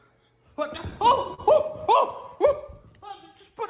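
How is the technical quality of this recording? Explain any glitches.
The recording has one audible glitch, a short burst of stutter, heard through a band-limited call path with nothing above 4 kHz, consistent with G.711 telephone coding.

Repeated stalls (stutter), 0.78 to 1.4 s: packets arrived late, so the jitter buffer ran empty five times. Each time the receiver stretched the last sound to bridge the gap, for about 80 ms in total and up to 40 ms at once, with nothing lost. It drags and catches. On a spectrogram, brief horizontally smeared, frozen-looking patches appear; the waveform shows repeated, near-identical cycles.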